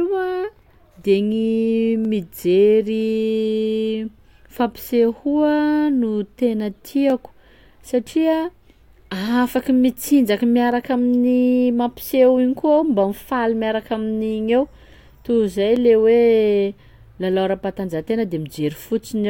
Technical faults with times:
2.05 dropped samples
7.10 dropped samples
10.72 dropped samples
15.76 dropped samples

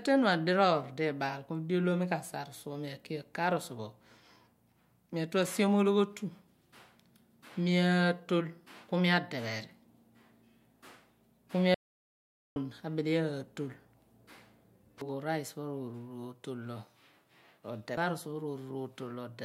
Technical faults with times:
11.74-12.56 audio dropout to silence

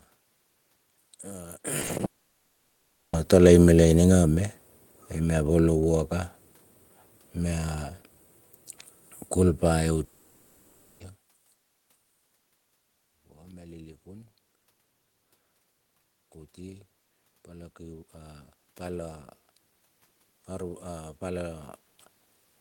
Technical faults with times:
1.81-2.01 short concealed packet loss
2.05-3.15 long network dropout
3.73-6.21 automatic gain falling
10.04-11.02 long network dropout
16.58-19.34 automatic gain rising

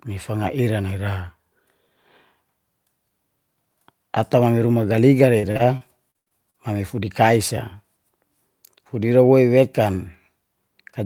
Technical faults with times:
5.39-6.56 repeated packet loss (robotic sound)

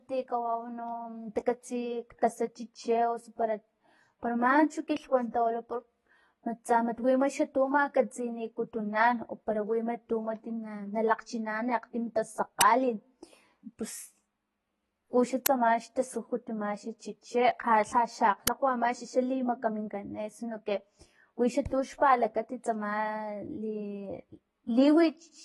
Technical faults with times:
0.00-25.45 AAC compression
12.61 uninitialised buffer
15.46 uninitialised buffer
18.47 uninitialised buffer

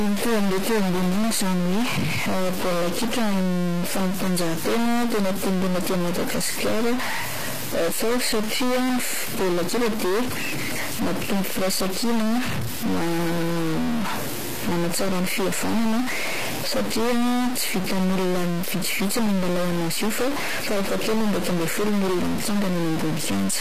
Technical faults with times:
0.00-23.60 stuck bit
0.00-23.60 HE-AAC compression

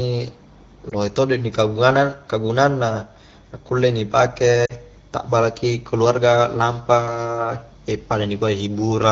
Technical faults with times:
0.90-0.93 lost AMR speech frames
4.65-4.73 lost AMR speech frames

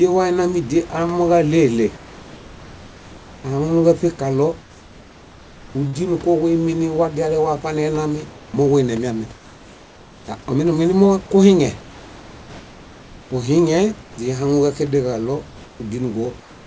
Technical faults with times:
1.97-3.44 comfort noise in place of the background
4.61-5.75 comfort noise in place of the background
5.87-5.96 burst of packet loss
8.30-8.54 comfort noise in place of the background
9.35-10.28 comfort noise in place of the background
11.81-13.31 comfort noise in place of the background
14.03-14.18 comfort noise in place of the background
16.40-16.66 comfort noise in place of the background

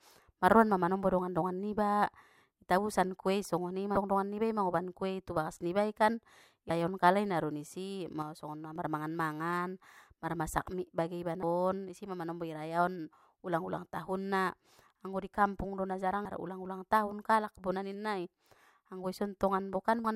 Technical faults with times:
3.94-3.97 damaged data in a compressed stream
6.67-6.70 damaged data in a compressed stream
8.22-8.76 one channel drops out
11.40-11.43 damaged data in a compressed stream
16.23-16.26 damaged data in a compressed stream
20.02-20.05 damaged data in a compressed stream

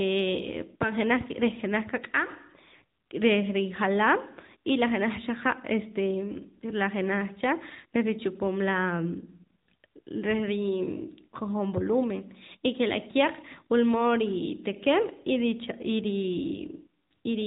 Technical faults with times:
0.00-17.46 AMR narrowband mobile codec

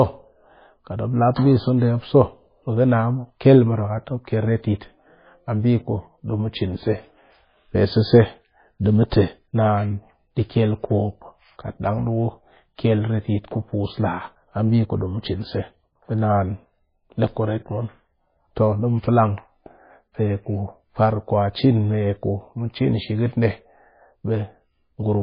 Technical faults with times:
0.00-25.23 MP3 compression

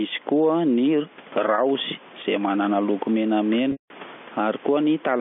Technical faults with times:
0.00-5.21 gain pumping
1.55-1.58 packet loss with pitch repetition
3.72-3.90 packet loss with pitch repetition

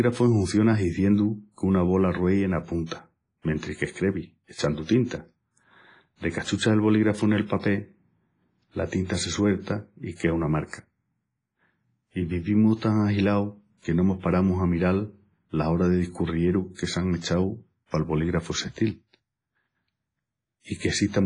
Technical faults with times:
0.00-21.26 WMA compression
2.86-2.91 pre-echo
4.54-4.88 pre-echo

